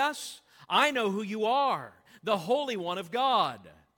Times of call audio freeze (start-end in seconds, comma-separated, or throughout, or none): none